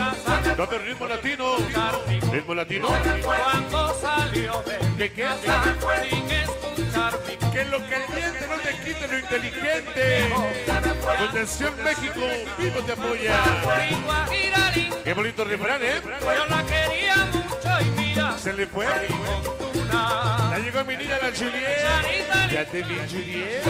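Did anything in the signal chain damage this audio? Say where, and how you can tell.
No, nothing audible points to any stage of the chain, from capture through to playback, having damaged this audio.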